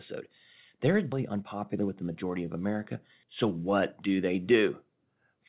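A speech recording, carried over a narrowband call path with nothing above 4 kHz, as fits G.711 mu-law. At 1.12 to 1.14 s the speech jumps abruptly forward with no gap. This is a skip ahead: about a second of audio was dropped while later audio was waiting, and the two sides were butted together. From 1.36 to 2.31 s the talker sounds hurried but keeps the same pitch, running at 110% speed. This is jitter buffer speed-up, where the receiver trimmed short pitch-period pieces, roughly a tenth of a second in total, to shrink excess buffered delay.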